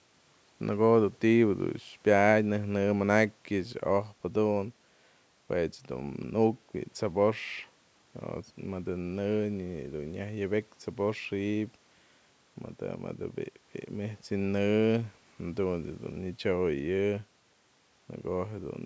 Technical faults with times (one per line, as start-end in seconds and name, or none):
none